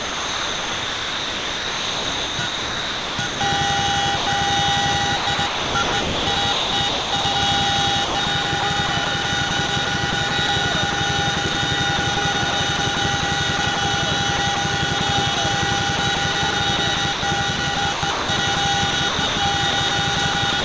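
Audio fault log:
0.0–3.41 s, 5.17–7.35 s, 8.05–13.77 s, 14.37–15.37 s, 15.97–20.64 s: sound chopped by the voice detector. Holes fill about 3.2 s, 1.3 s, 0.6 s, 80 ms and 0.93 s of these stretches. Comfort noise replaces the sound. The likely cause is the sender's detector switching transmission on and off.
4.17–4.27 s: sound dropped by the voice detector. A 100 ms piece of sound is lost. Steady comfort noise stands in until sending resumes. The detector likely took that sound for background. Above it, the call path passes nothing over 8 kHz.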